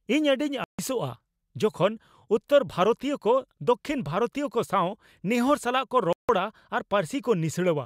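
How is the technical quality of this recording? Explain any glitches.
The speech has two brief silences where the sound cuts out. A Bluetooth dropout at 0.64 to 0.79 s removes about 150 ms, and a second at 6.13 to 6.29 s removes 160 ms. The likely cause is wireless audio packets arriving too late at the headphones and being discarded, so output falls silent until valid data returns. Each gap has abrupt edges or a fade of a few milliseconds, and the speech picks up further along, as though it had kept playing during the hole.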